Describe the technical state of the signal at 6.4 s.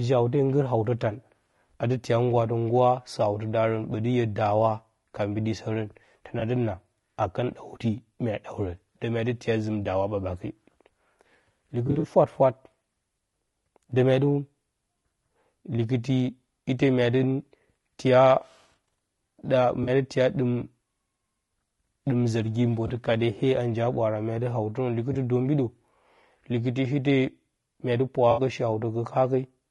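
At 6.39 to 6.42 s there's a short AAC frame loss with concealment. A single chunk of the coded stream, about 20 ms, never made it to the decoder, so the decoder patched the gap by reusing and shuffling the last good spectrum instead of going silent. You hear it as a brief smeared, noisy, phasey blip in the speech, too short to fade toward silence before normal decoding picks back up.

Underneath that, the whole clip has a rough, grainy texture, likely from low-delay AAC compression of the AAC-ELD kind used for video calls. At a low bitrate the coder can't spend enough bits on the voice's spectrum, so noise creeps in between the pitch harmonics and the top end sounds thin and a bit synthetic. The amount of damage points to a low rate, somewhere around 32 kbps.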